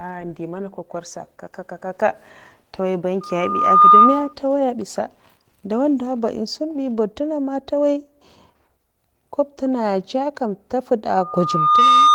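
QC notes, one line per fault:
3.21–4.33 s and 11.12 s to the end, loudspeaker feedback squeal: a pure tone at 1.2 kHz swells up over about 0.7 s until it sits well above the speech, a bit less fiercely the second time. The mic is catching its own loudspeaker, and at that one frequency the loop gain tops unity, so the tone keeps feeding itself. The Opus coding itself does only light damage.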